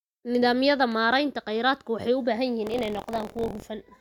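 Buffer tearing from 2.65 to 3.63 s: writer and reader cross inside each buffer, splicing in slightly older audio, giving a robotic rattle at 43.1 Hz, consistent with a 1024-sample buffer.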